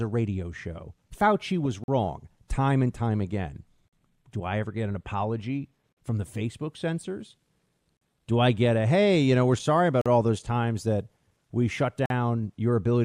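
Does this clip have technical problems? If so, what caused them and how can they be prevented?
Yes. Gaps between chunks: 44 ms hard-edged silences at 1.84, 3.88, 5.93, 7.97, 10.01 and 12.06 s. The gaps repeat every 2 s at the chunk joins, after "time and time again" and before "all those times that". Prevent it by removing codec padding and scheduling each chunk gaplessly.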